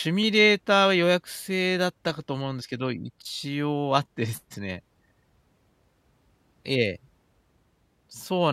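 From about 0.23 s to 7.99 s there's a click roughly every 0.97 s, about ten in all. These are clock drift buffer slips, likely from two devices running on separate clocks, off by a couple of hundred ppm, so the buffer drops or repeats a handful of samples each time.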